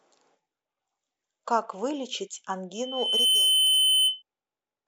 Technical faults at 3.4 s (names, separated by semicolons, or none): loudspeaker feedback squeal